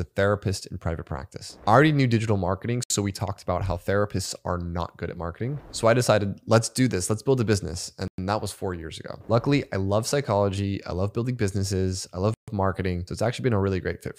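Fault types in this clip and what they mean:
Bluetooth stall: the audio cuts to complete silence three times, at 2.84 s for 66 ms, 8.08 s for 104 ms and 12.34 s for 139 ms, then carries on. The likely cause is interference delaying packets until the headphone buffer ran empty.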